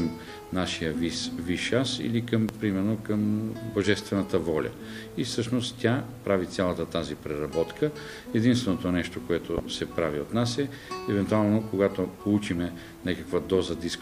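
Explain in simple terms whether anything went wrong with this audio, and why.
There are two loud pops, at 2.49 to 2.52 s and 9.58 to 9.61 s. Each is a sharp click over the sound. A sudden electrical jolt, likely from a plug or switch, caused them.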